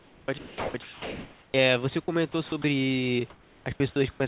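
The sender's voice detector likely switched transmission on and off repeatedly, causing sound chopped by the voice detector at 0.0–1.54 s, 2.04–2.64 s and 3.3–4.2 s. About 1.36 s, 0.12 s and 0.52 s of speech became comfort noise, so syllables vanish, and the background is band-limited, with nothing above 4 kHz.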